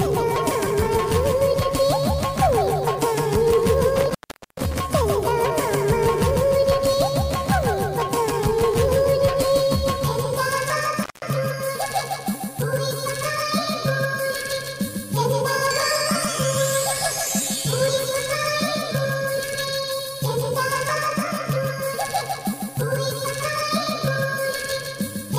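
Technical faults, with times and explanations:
3.96–4.74 s and 11.03–11.25 s, intermittent contact: a loose connection briefly opens, for 0.43 s then 0.16 s, dropping the sound to faint hiss, with crackle at each break.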